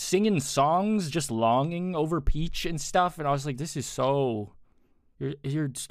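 No technical faults are audible anywhere in the clip; the speech runs without dropouts, clicks, distortion or level breaks.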